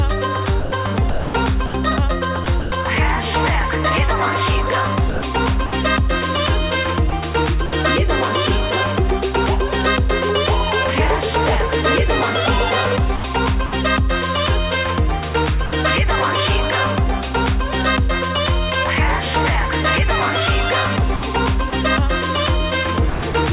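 Between 0.6 and 2.72 s the sound gets chopped by the voice detector, most likely the sender's detector flipping on and off. About 580 ms of it is swapped for comfort noise, so the sound stutters with holes in it. Shorter bursts of the same choppiness follow at 5.1 to 5.72 s (about 180 ms replaced), 7.1 to 7.72 s (80 ms) and 13.16 to 13.72 s (140 ms).

From 15.66 to 15.72 s the sound is dropped by the voice detector. It was likely judged to be background and not sent, so 60 ms of it gives way to steady comfort noise before it returns.

The choppiness comes back at 21.16 to 21.72 s, with about 80 ms filled by comfort noise, and again at 23.1 to 23.34 s, with 140 ms replaced. The whole clip is band-limited to nothing above 4 kHz, which fits a G.711 call path.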